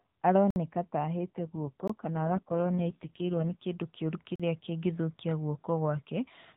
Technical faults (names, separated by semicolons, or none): block of digital silence; AMR rate drop